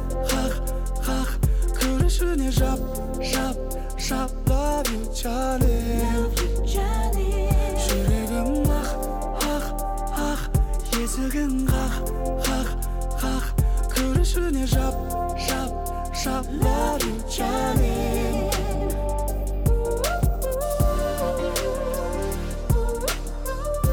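No technical faults can be heard anywhere in this audio. Nothing in it points to a problem with how the sound was captured, carried or played back.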